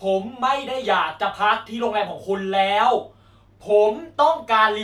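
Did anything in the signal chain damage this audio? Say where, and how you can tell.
No, nothing in the chain audibly damaged this speech recording at any stage.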